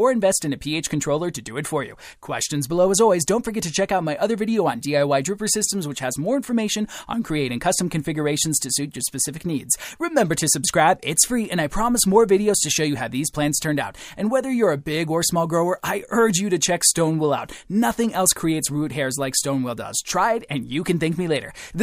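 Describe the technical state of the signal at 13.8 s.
At 13.8 s the signal runs intact, with no audible fault at that point.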